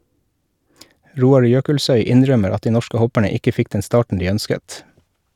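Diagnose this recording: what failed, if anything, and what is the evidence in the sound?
Nothing seems to have gone wrong here: listening through the recording, no stage along the chain leaves any audible sign of trouble.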